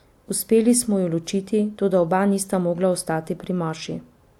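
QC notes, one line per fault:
No faults found in the speech recording. Nothing needed a time entry or any note of a problem.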